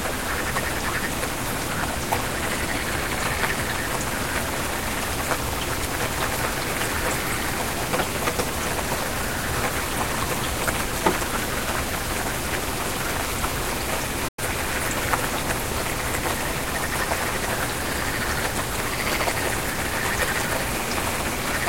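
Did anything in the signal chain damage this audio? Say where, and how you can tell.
Yes. A digital broadcast dropout occurred at the reception and decoding stage, from 14.28 to 14.39 s. The sound fades out over about 8 ms, stays silent for about 96 ms, then picks up further along, so that stretch of material is gone. The gap fits three lost frames of roughly 32 ms each, which the receiver muted after they were lost or failed checking. A buffer underrun would stutter and resume late, and packet-loss concealment would fill the gap. Here there is a smooth fade into silence instead.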